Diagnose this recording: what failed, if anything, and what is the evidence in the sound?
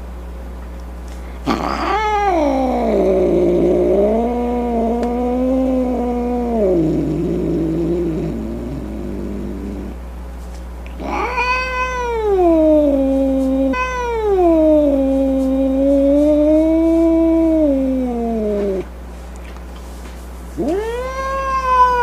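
Playback stage, stream segment repeated: from 13.73 s to 15.72 s, two seconds of sound replay after a blip, because a fetched segment was queued twice. Unlike a dropout, nothing is missing.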